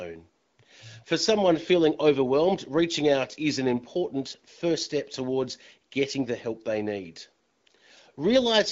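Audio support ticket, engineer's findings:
No faults found in this speech sample.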